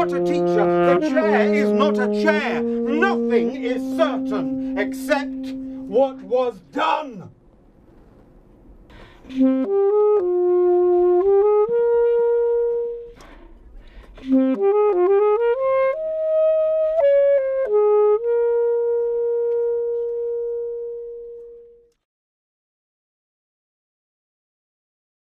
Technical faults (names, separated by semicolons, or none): none